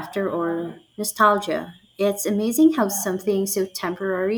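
No technical faults can be heard anywhere in it.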